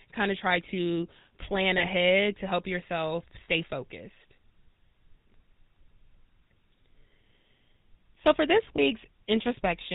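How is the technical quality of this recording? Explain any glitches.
The recording has clear technical flaws: the whole clip carries codec damage, and three brief glitches interrupt the speech.

GSM full-rate codec: Throughout, the speech sounds buzzy and gravelly, with nothing above 4 kHz. This points to a codec near 13 kbps that models the vocal tract and drives it with a coarse pulse train. The constant rasp sets it apart from plain low-pass filtering, which only muffles.

Lost GSM frames: At 1.78 to 1.87 s, between "of try to plan" and "to help yourself", at 3.44 to 3.49 s, just after "to help yourself", and at 8.76 to 8.79 s, after "for this", the sound briefly hangs in a rough metallic ring. The decoder repeats the last good frame for about 20 to 40 ms, which fits one or two lost frames. A clean dropout would be silent instead.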